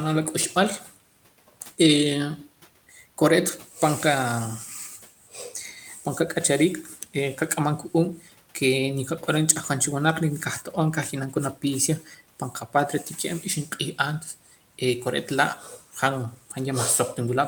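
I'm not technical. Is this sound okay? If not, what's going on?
No. This is speech cut by the noise suppressor: the filter meant to remove background hiss mistook bits of speech for noise and turned them down. Soft sounds and word endings come out swallowed or faint at 0.55–0.97, 4.99–6.36, 6.83–7.39, 7.91–8.56, 11.12–11.63, 12.0–13.05, 13.42–14.81 and 15.59–15.96 seconds. The faint room noise underneath is part of the recording itself.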